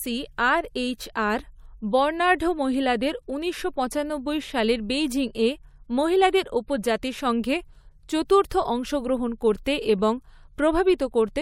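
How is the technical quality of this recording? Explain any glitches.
The recording has audible pre-echo near the end of the speech, at 8.28, 8.50, 9.65 and 10.98 s. Before each sharp attack, a burst of hiss about 14 to 16 ms long rises about 12 to 18 dB above the quiet floor. Each sharp onset sounds softened and smeared. The spread points to a codec coding each roughly 26 ms block as a single unit, never switching to short blocks, so noise meant for the loud attack leaks backward. On a spectrogram, a broadband smear appears just left of each onset's vertical edge. The waveform shows grainy noise ahead of the attack.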